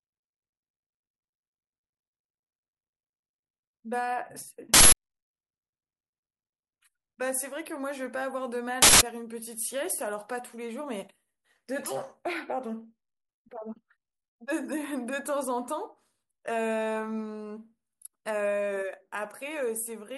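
At 4.74 s a harsh burst of digital noise cuts into the speech. It lasts about 0.19 s, ending at 4.92 s. A second burst of the same length runs from 8.82 s to 9.01 s. Both are an uninitialised buffer fault. A block of audio was sent to playback before any samples were written into it. Stale memory played out as loud, raw noise instead. The 186 ms length fits an 8192-sample buffer.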